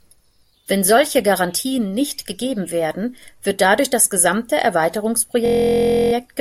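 Speech clip with a system hang loop from 5.46 to 6.13 s: the system froze while the hardware kept replaying one 23.2 ms segment about 29 times, which fits a 1024-sample ring buffer. At 43.1 Hz the repeats merge into a steady buzz.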